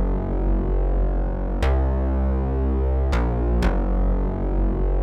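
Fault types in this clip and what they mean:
No technical faults can be heard anywhere in the signal.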